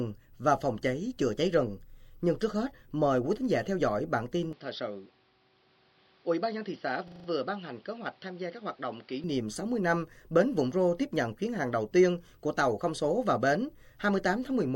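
The recording's input most likely switched to a poorer device at 4.53 s, with no gap at the switch. Until 9.24 s nothing passes above 5.7 kHz, so the sound turns dull and boxy, drops roughly 5 dB, and gains a new background noise about 30 dB under it.

At 7.08 s, a system hang loop starts: the computer stalled while the audio hardware kept replaying one 40 ms stretch of its ring buffer. That piece repeats five times at 25 Hz until 7.28 s, a brief machine-gun stutter that costs almost no audio.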